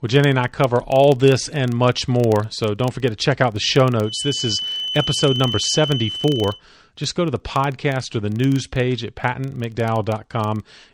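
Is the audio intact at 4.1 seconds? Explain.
No. There's a feedback whistle from 4.00 to 6.63 s, a thin 3 kHz tone about 10 dB under the speech, likely from a speaker-to-mic loop sitting right at the edge of feedback. Underneath, a filter restarted on every block adds a 25 Hz buzz, each block kicking off with a tiny transient that tracks the speech level.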